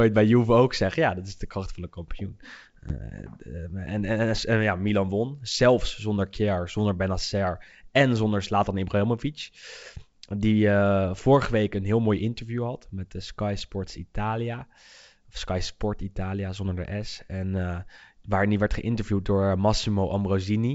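Packet loss on an ADPCM call hits at 2.89 to 2.95 s, just after "kracht van de kampioen". About one packet, 10 ms of audio, becomes a hard-edged silence. The G.722 decoder's predictor and step size then drift from the sender's, so the returning speech sounds disturbed until it resynchronises.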